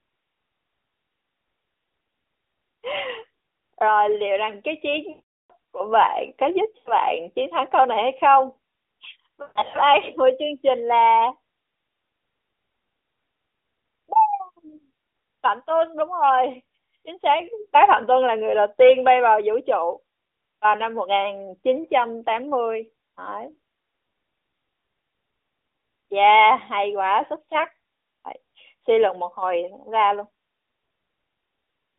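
Lost AMR speech frames occur at 5.10 to 5.52 s, 6.78 to 6.93 s and 9.42 to 9.77 s. The decoder bridges failed frames by reusing the last good pitch and vocal tract settings at falling gain. The 0.4 s gap smears and fades to silence. The 9.4 s stretch breaks up in patches.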